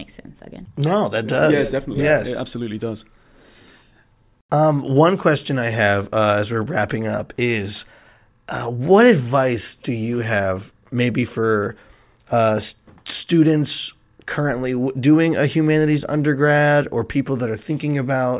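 No technical faults can be heard anywhere in the speech recording.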